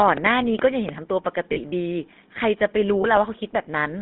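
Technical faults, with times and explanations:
Throughout: GSM full-rate codec. The speech has the buzzy, gravelly roughness of the first GSM codec, plainly audible. It rebuilds the voice from a vocal-tract model driven by sparse pulses. The band is cut to roughly 200 Hz to 3.6 kHz, which fits a 13 kbps line.
0.08 to 0.90 s: train of clicks. About five sharp clicks tick over the sound, near 5 per second at an uneven pace. They stand out strongly, about 15 dB above the speech. The likely cause is interference from nearby equipment or a faulty connection.
1.52 to 1.58 s and 3.02 to 3.05 s: lost GSM frames. Two dropouts of 40 ms and 20 ms are each replaced by the last good frame, repeated. The sound holds briefly as a rough, metallic ring instead of moving on.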